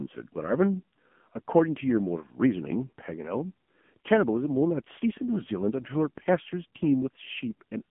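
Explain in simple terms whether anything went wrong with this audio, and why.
Yes, something's off: the whole clip has gone through the AMR narrowband mobile codec, the old phone-network speech codec. It keeps only a thin telephone band, roughly 150 Hz to 3.4 kHz, with nothing above 3.5 kHz, so the voice sounds boxy and dull. It's also squeezed hard: the codec rebuilds speech from a simple throat-and-mouth model fed by a few pulses, and that gives the voice its buzzy, synthetic, robotic edge from start to finish.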